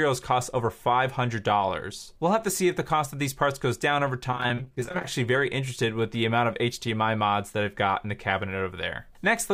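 From 4.31 to 5.05 s there's a burst of repeated packet loss, and you get that robotic sound. Packets kept going missing or arriving late, and each gap was papered over by stretching out whatever came just before it, with the next hole close behind. The holes are tiny, none longer than about 21 ms, but they're dense, fitting roughly twenty lost packets. About a third of that stretch is patched-in filler, so it comes out choppy with pieces missing.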